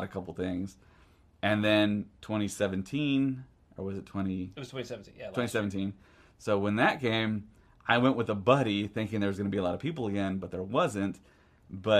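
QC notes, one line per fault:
No technical faults can be heard anywhere in the signal.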